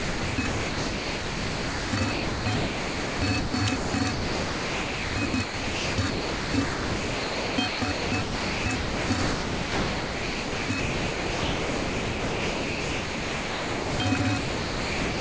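Sound chopped by the voice detector runs from 0.0 to 15.19 s. Gating that repeatedly switches transmission on and off is the likely cause. About 12.8 s of the sound is replaced by synthetic comfort noise, so the audio is choppy. The call path leaves nothing above 8 kHz, which fits a wideband G.722 link.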